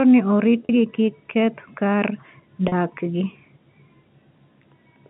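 At 0.65 s and again at 2.68 s, about 40 ms of the speech goes missing. Each gap is packet loss with pitch repetition. The receiver loops the last pitch period to fill it. That leaves a brief held, buzzy tone over the narrow telephone band.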